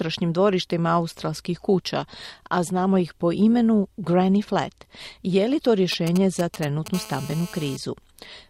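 From 5.92 to 6.88 s, GSM signalling bursts break in at roughly 10 dB below the speech. A nearby 2G phone's intermittent transmissions are rectified into galloping ticks and brief 217 Hz buzzes, which show as clustered vertical stripes on a spectrogram.

From 6.94 to 7.77 s, a steady GSM phone buzz follows at about 18 dB below the speech. The phone's continuous 217 Hz transmit pulses produce a raspy tone, visible as evenly spaced harmonic lines on a spectrogram and a regular pulse train in the waveform.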